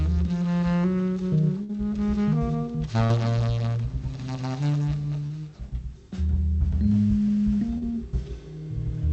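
The audio has two bursts of packet loss, at 1.63 to 1.77 s and 3.05 to 3.13 s. In each, about 40 ms of audio never arrives, and the receiver extends the last sound for roughly 50 ms, fading it into a held buzz or hiss before playback jumps ahead. The first event stretches the timeline by 19 ms and the second by 9 ms. Two short concealed packet losses follow, at 5.26 to 5.33 s and 7.78 to 7.92 s. Each loses 40 ms, and pitch- or noise-based continuation over 34 and 38 ms respectively fills the gap, heard as a brief smear. The later one adds about 15 ms.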